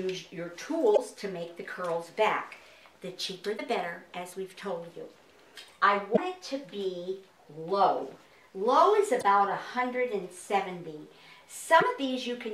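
Five short bursts of damaged data in a compressed stream break into the audio at 0.93–0.99, 3.54–3.60, 6.13–6.18, 9.18–9.24 and 11.77–11.83 s. Each lasts about 55 ms. Corrupt bytes make the decoder misread frames and lose sync, producing brief glitches.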